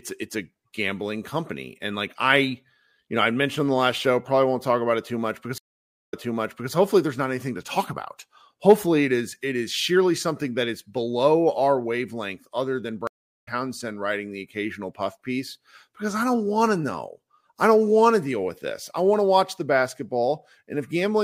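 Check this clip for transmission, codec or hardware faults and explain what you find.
Two stream reconnects break the speech. Stream reconnect at 5.58 to 6.73 s: the connection dropped and the player restarted its decoder mid-stream, leaving 544 ms of silence before speech resumes 601 ms earlier, so a stretch repeats. Stream reconnect at 13.07 to 13.49 s: a 395 ms gap, then speech picks up about 300 ms later, so a short piece is skipped.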